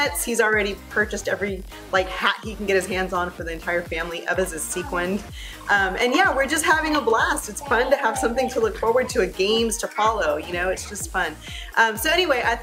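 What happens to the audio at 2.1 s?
Nothing goes wrong at 2.1 s; the audio plays through that moment intact, with no dropout, click or other fault to be heard.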